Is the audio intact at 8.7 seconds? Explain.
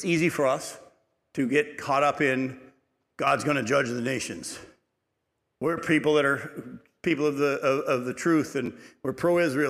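No. A repeated buffer occurs from 8.66 to 8.68 s, just after "of of the truth". New audio did not reach the output in time, so the device replayed the piece it already held, two extra times. Each repeat is about 11.6 ms long, which fits a 512-sample buffer, and hard joins separate the three copies. Because the repeats are so short, the fault sounds like a brief buzz or click rather than an audible stutter. Essentially no audio is lost.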